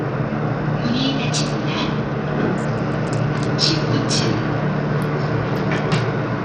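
A recording of sounds that most likely went through Bluetooth SBC compression at a starved bit pool, the kind of coarse encoding that fits a low bitrate around 80 kbps. With so few bits to share out across its sub-bands, the codec leaves nothing above 15.4 kHz, and the coarse quantisation left in the remaining bands lays a plainly audible gritty, rough texture over the sound from start to finish.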